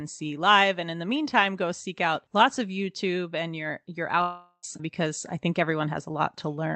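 A long network dropout runs from 4.21 to 4.65 s, just after "and your your" and before "because I think". The speech gives way to a buzzy continuation of the last sound that fades over about 0.41 s, then roughly 60 ms of near-silence, before the talker returns partway on. About 0.42 s of audio is simply missing. This is likely a stall in packet delivery, with the receiver concealing the gap. Through the call path, the band stops near 8 kHz, which fits Opus at around 32 kbps.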